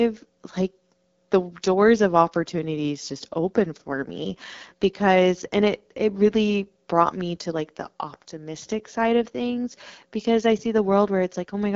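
The speech runs through the AMR wideband (HD Voice) codec from start to finish, at a low rate consistent with 8.85 kbit/s. The coder models the vocal tract and pulse excitation, and with so few bits the speech sounds plainly rough and raspy, with nothing above 7.2 kHz.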